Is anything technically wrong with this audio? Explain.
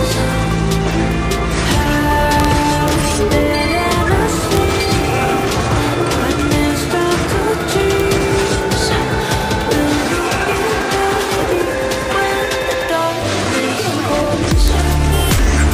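Yes. Violent, sharp cracks burst out on loud moments at 1.72, 2.40–2.45, 2.88, 4.55, 8.00–8.12, 14.68 and 15.32 s. This is integer overflow: peaks reaching the numeric ceiling wrap to the opposite extreme instead of being limited, so the waveform flips across its full range.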